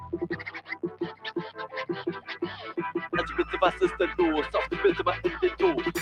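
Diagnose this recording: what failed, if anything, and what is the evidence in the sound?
A noise suppressor built for speech was applied to non-speech material in the call-processing stage. It treats sustained tones, ambience and decays as noise, so levels swing by around 10 dB throughout, with held sound sinking and attacks passing, giving a pumping, thinned texture.

Between 0.44 and 1.29 s the same suppressor cut one sound harder than the rest, by up to about 13 dB for roughly 0.7 s of that window. The sustained, fading parts of the sound drop away.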